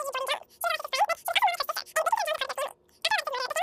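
From the very start and all the way through, the speech runs at three times its natural speed and sits about 19 semitones higher, so it comes out as a squeaky, chipmunk-style gabble. That's a wrong sample rate: the samples are being clocked out far faster than they were captured, with no resampling in between. A threefold jump like this fits audio recorded at 16 kHz but played back as if it were 48 kHz.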